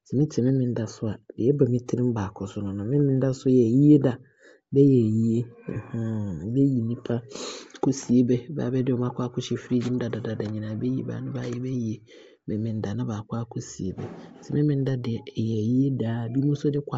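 From the very start, the whole recording carries a breathy, grainy edge on the speech, with the top end sounding hollowed out and filled in with a fizzy hiss instead of real detail. That's most likely Bluetooth LC3 compression, the LE Audio codec, running lean. The damage is plainly audible, and the way the highs are traded for noise fits something around 32 kbps with short 7.5 ms frames, where the encoder zeroes much of the upper spectrum and the decoder papers over the gap with noise.

At 5.74 s there's a brief blip of lost LE Audio frames, running to about 5.76 s. For roughly 22.5 ms, which lines up with about three 7.5 ms frames going missing, the decoder can't get real data and keeps reusing the last spectrum it had with the signs scrambled. What you hear is a quick noisy smear where the speech should carry on cleanly, then it snaps back.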